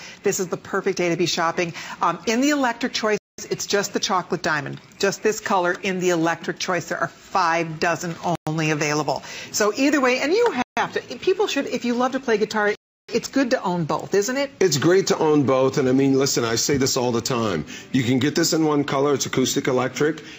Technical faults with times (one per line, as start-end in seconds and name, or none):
3.18-3.38 Bluetooth stall
8.35-8.47 Bluetooth stall
10.62-10.77 Bluetooth stall
12.75-13.09 Bluetooth stall